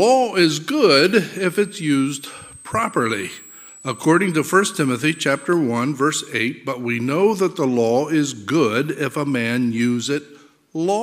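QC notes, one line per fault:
1.36–5.46 s, switching supply whistle: a thin high whistle drifting between 7.69 and 8.44 kHz, about 25 dB below the signal. A switching power supply is running in an audible burst mode or beating with another one, and its pitch shifts as its load changes.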